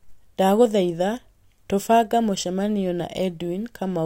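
A short speech recording, with nothing technically wrong to report.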